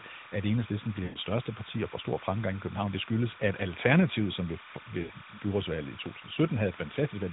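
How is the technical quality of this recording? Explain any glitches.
The recording has two clear problems: a constant chirping underneath the speech, and two short dropouts where the audio smears and fades. It passes through the AMR narrowband mobile codec, so the speech has the band-limited phone sound of that path.

Timecode bleed (throughout): a steady warbling chirp sits roughly 15 dB under the speech, alternating near 1 and 2 kHz. This is linear timecode leaking from a neighbouring line, and its rate fits 29.97 frames per second.

Lost AMR speech frames (1.04 to 1.18 s, after "at enhedslisten"; 5.02 to 5.13 s, after "som ved"): the speech stretches and fades, then returns rough before "største parti og får" and "byrådsvalget i". Corrupted frames made the decoder repeat its last good settings at falling gain, for 120 ms and 80 ms.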